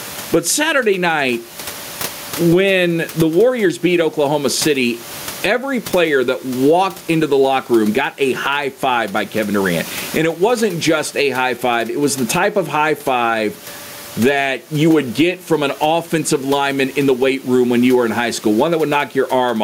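Gain pumping runs throughout: the gain swings around 20 dB, pulled down under loud speech, likely a fast limiter fighting excess gain. Unlike a gate, it never falls silent.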